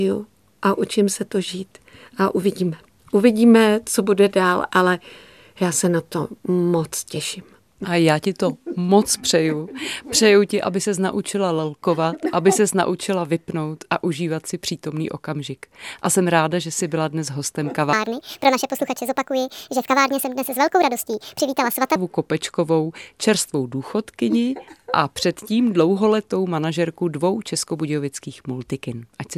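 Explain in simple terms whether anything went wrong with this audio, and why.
Something did go wrong, in one stretch. From 17.93 to 21.96 seconds there is a section at the wrong speed. The speech runs about 1.54 times too fast. Because speed and pitch move together, the voice jumps up by roughly seven semitones, a bit over half an octave. It sounds squeaky and rushed, then snaps back to normal. The likely cause is that this part was played or edited against the wrong clock.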